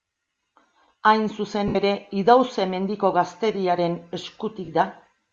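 Throughout the speech, the upper band carries a breathy, grainy hiss, likely Bluetooth LC3 compression refilling zeroed high frequencies with noise. It hisses rather than warbling like MP3 swirl.

From 1.68 to 1.75 s and from 4.65 to 4.68 s come lost LE Audio frames. The decoder recycles the last spectrum with scrambled signs, so the sound smears into noise instead of clicking or going silent. The first gap fits seven 10 ms frames.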